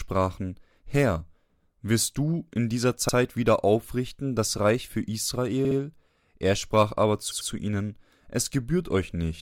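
Repeated frames: a block of compressed speech was sent again and replayed, making a stuttering skip. It happens at 3.09 s (64 ms block, repeated once), 5.65 s (64 ms, twice) and 7.31 s (96 ms, twice).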